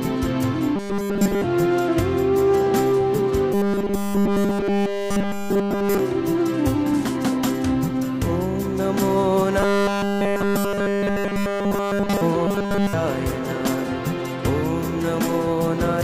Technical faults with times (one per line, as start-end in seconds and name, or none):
0.76-1.44 robotic sound from repeated short buffers
3.54-5.99 robotic sound from repeated short buffers
9.60-12.22 robotic sound from repeated short buffers
12.47-12.93 robotic sound from repeated short buffers